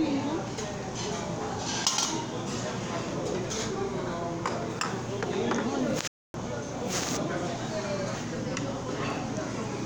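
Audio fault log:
6.08–6.34 s, playback stall: the sound stops abruptly in mid-flow and the output stays silent for about 266 ms before audio resumes. The likely cause is that the player briefly ran out of buffered data or its output thread was blocked until it recovered.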